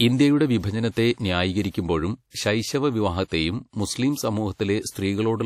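From start to finish the speech carries a ringing, washy coloration and a hiss that swells and fades with the level, likely from WMA compression at a rate that fits about 48 kbps. Long transform blocks smear quantisation noise over tens of milliseconds, and weak components are dropped, so the damage is plainly audible. A hard ceiling at 16.4 kHz goes with it. A plain low-pass filter would dull the top without this breathing, smeared noise.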